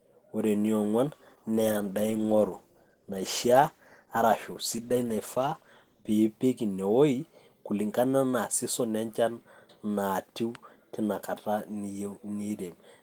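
From 1.15 to 6.19 s there's a call bitrate drop: the speech goes rough and muffled as the encoder codes coarsely, consistent with roughly 32 falling to 13 kbps.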